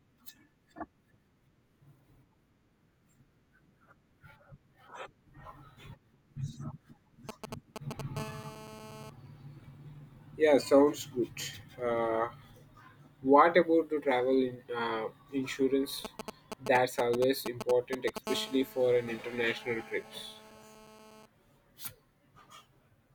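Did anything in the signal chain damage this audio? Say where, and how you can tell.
Yes, in the analogue wiring. GSM signalling bursts appear from 7.29 to 8.01 s and from 16.05 to 18.18 s. They gallop as dit-dit-dit ticks and short 217 Hz buzzes. The second group is nearly as loud as the speech. A nearby 2G phone's radio pulses are being rectified by the audio circuit.

GSM phone buzz follows at 8.17 to 9.10 s and 18.27 to 21.26 s. It is a steady, raspy 217 Hz buzz with many harmonics, unrelated to the speech. It sits about 16 dB and about 18 dB below the speech. The phone is now in a call, transmitting in bursts 217 times a second, and the analogue input demodulates every burst.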